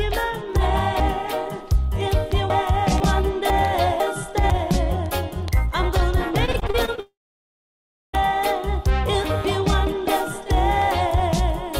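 Between 1.0 and 3.0 s, and again from 3.5 to 4.5 s, chunks play out of order: a 500 ms block arrives three chunks, then one chunk, late, giving jumbled audio with hard joins. From 6.45 to 7.00 s, repeated packet loss leaves seven short holes, none over 30 ms, patched by continuing the previous sound, so about a quarter of the stretch sounds choppy and robotic. From 7.00 to 8.15 s the concealed tail fades into roughly a second of silence before the audio resumes with material missing, likely a long network dropout.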